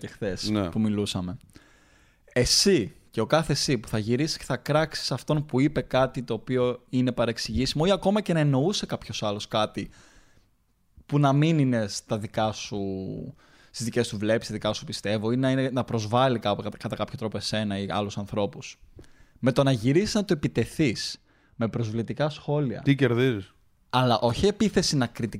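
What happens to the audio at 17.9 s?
Nothing goes wrong at 17.9 s; the speech carries on intact through that moment with no dropout, click or distortion.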